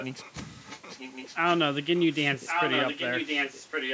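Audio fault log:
0.00–0.32 s, 0.54–1.59 s, 1.96–2.07 s and 2.46–3.93 s, echo leak: A second copy of the speech trails the original by about 1.1 s. It sits about 15 dB down in the first two stretches and sinks to about 25 dB down near 2 s. From 2.46 s it rises to nearly the level of the speech itself. The likely cause is a far-end loudspeaker whose echo canceller let part of the returned sound through.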